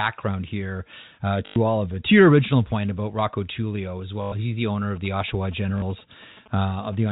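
Speech over a G.711 telephone path, band-limited to 4 kHz, with two kinds of trouble. There's packet loss with the last packet repeated three times: 1.46 to 1.56 s (between "here uh" and "all of it"), 4.22 to 4.32 s (just before "he's the owner of"), and a shorter 40 ms one at 5.8 s. The receiver loops the last good chunk, so you get a robotic stutter. The 100 ms gaps each behave like five lost packets, which fits 20 ms packets and the buzz that goes with them. Then from 4.96 to 6.95 s, right after "he's the owner of", come GSM signalling bursts. A nearby 2G phone is doing its pre-call or text handshake, and the audio circuitry rectifies the radio pulses into a galloping dit-dit-dit of short buzzes at about 217 Hz, sitting roughly 25 dB under the speech.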